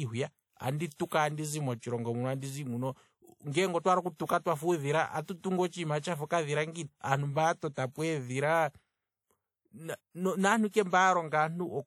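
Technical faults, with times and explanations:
Throughout: WMA compression, likely at a low bitrate around 48 kbps. The speech has a ringing, washy quality with a hiss that rises and falls with the signal, as quantisation noise smears across long transform blocks and quieter detail gets thrown away.
1.06 to 1.12 s and 5.38 to 5.44 s: pre-echo, just before "andizi motshilongo muno andizi" and again between "twafa uudhila atu" and "otshiima tshafa okadhila". A short hiss of about 56 to 58 ms runs ahead of each attack, because the codec spreads the noise meant for the loud onset back into the quiet moment before it, which softens the attack.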